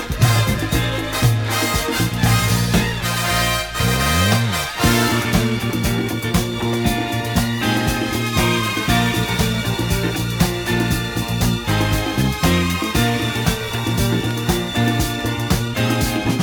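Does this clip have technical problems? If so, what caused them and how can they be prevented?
No, nothing in this audio points to a technical fault, so there's no cause to trace and nothing to prevent.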